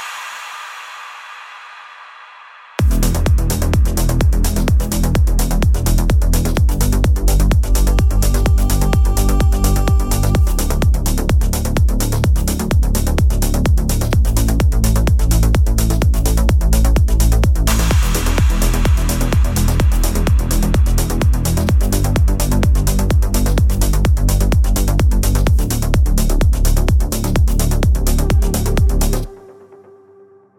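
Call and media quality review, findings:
No faults found.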